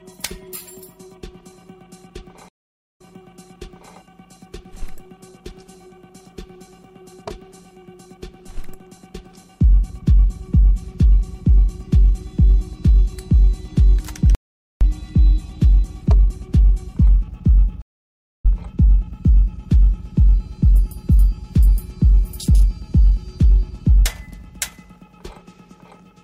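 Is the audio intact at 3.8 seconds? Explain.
No, 3.8 s sits inside a stream reconnect from 2.49 to 3.95 s: half a second of silence, then a fresh decoder restarts, replaying audio from 0.96 s earlier.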